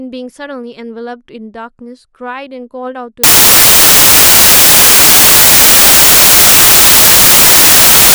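Up to about 3.24 s the speech comes through cleanly, and then from 3.24 s to the end it turns into samples built from the wrong bytes. The reader is pairing each sample's bytes wrongly, maybe off by one or in swapped order, so the jittery low bits end up as the big part of every value. What you get is loud, harsh broadband noise, close to white on the louder stretches.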